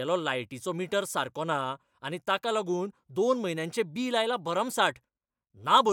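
Speech recording with no technical faults to report.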